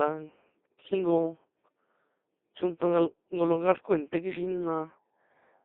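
Throughout, the speech sounds robotic and buzzy, squeezed into a band of roughly 250 Hz to 3.7 kHz. This is the Codec 2 vocoder, heavily damaging: only pitch, voicing, energy and spectral shape survive, resynthesised from sine waves, which fits a 2.4 kbit/s mode.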